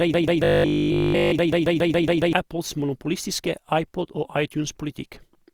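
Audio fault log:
0.00–2.33 s, broken-record loop. The clip opens with the loop already running. A fragment of about 139 ms plays back to back, identical each time, 16 times over. The sound stalls on that one piece and never moves forward. The likely cause is a player or stream that stalled and kept sending the last fragment it held. The speech meant for those seconds is gone.
0.44–1.32 s, robotic sound from repeated short buffers. Within the loop, the sound turns into a hard, metallic buzz at 50 Hz. Essentially all of this stretch is made of repeats. A 50 Hz buzz fits a slice of about 20 ms being replayed over and over. New audio likely arrived too rarely, so the software kept repeating that short slice.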